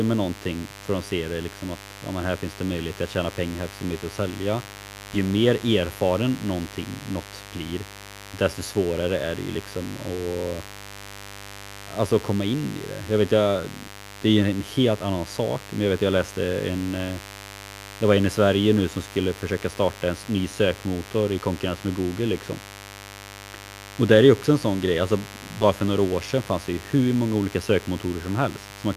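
A steady mains buzz sits under the speech from start to finish. Its fundamental is 50 Hz, and sharp switching spikes, two in every mains cycle, spread harmonics up into the kilohertz range. That kind of interference gets in through a dimmer, a rectifier or a missing shield in the signal path. It comes across as a raspy, constant buzz rather than a smooth hum, about 20 dB below the speech.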